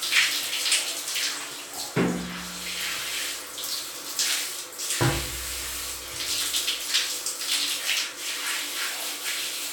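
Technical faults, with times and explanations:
No technical faults can be heard in this recording.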